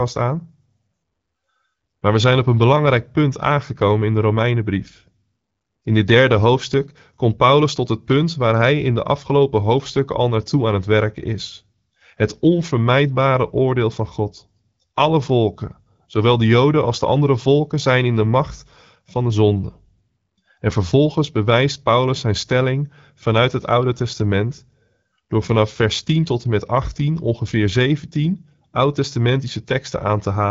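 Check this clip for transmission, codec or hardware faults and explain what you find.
No faults found; the speech shows the normal band limit of AMR wideband (HD Voice) coding at 12.65 kbit/s, with nothing above 7.4 kHz.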